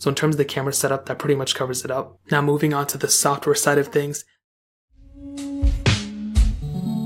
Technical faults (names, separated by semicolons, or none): clock slip clicks